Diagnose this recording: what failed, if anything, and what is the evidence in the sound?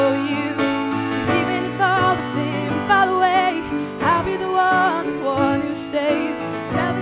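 Nothing failed: there is no evidence of a fault at any stage, and the lack of content above 4 kHz is just the normal ceiling of the narrowband call path the audio went through.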